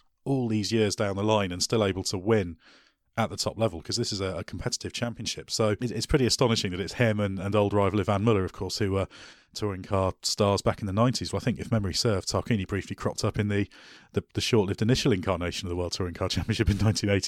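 At 5.04 to 5.24 s, after "is a a competitive", and again from 9.33 to 9.94 s, between "of course who were" and "stars back in the", the level drops abruptly by about 6 dB, likely because one channel drops out. The waveform visibly halves, and the spectrogram dims evenly across all frequencies.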